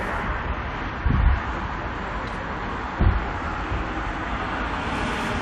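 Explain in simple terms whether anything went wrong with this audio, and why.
Nothing went wrong; there are no audible faults here.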